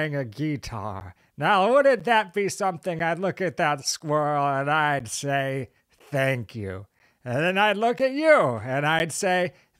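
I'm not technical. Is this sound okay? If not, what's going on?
No. There are periodic USB or driver dropouts. From 1.0 to 9.0 seconds, a tiny slice of speech, about a hundredth of a second, goes silent once every second. You hear this as a steady tick. Something on the computer briefly interrupts the audio connection on a fixed schedule.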